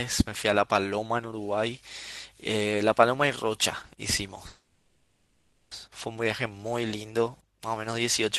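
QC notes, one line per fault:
4.47–5.73 s, call audio freeze: speech stalls into a fading buzz, then 140 ms of silence, likely an emptied jitter buffer. It resumes intact, 1.24 s late.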